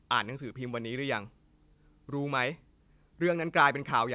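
No technical faults can be heard in the speech. It comes through a call path with nothing above 4 kHz, a band limit that fits a 64 kbps G.711 mu-law codec.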